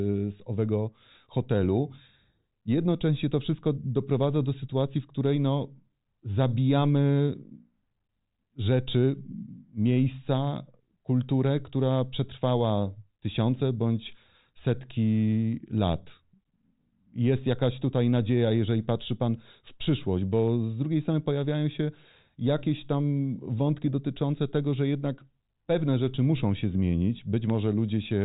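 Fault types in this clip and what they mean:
Listening through this speech clip, nothing stood out.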